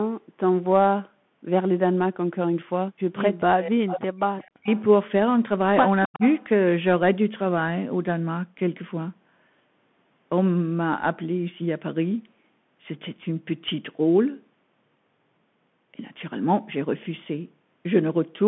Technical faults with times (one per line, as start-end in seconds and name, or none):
0.00-18.48 Bluetooth CVSD headset codec
3.40-4.21 speech suppressed in double talk
3.87-3.93 echo leak
4.22-4.81 echo leak
4.50-4.68 speech suppressed in double talk
6.06-6.22 speech suppressed in double talk
6.13-6.44 echo leak